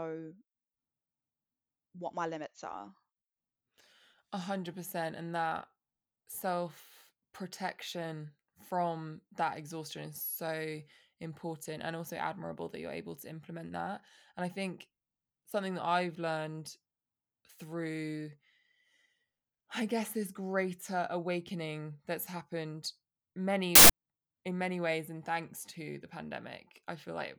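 At 23.75 s, for about 0.14 s, a burst of loud, harsh broadband noise covers the speech, ending just before "in many ways and". This is samples built from the wrong bytes: misaligned byte assembly lets the rapidly varying low-order bits dominate each sample value.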